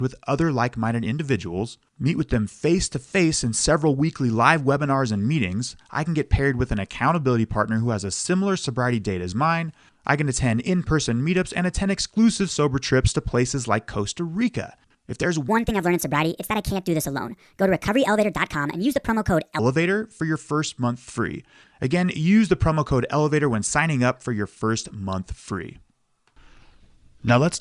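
From 15.48 to 19.59 s, wrong sample rate: speech runs 1.45 times fast and about 6.5 semitones high together, unlike time-stretching, which leaves pitch unchanged.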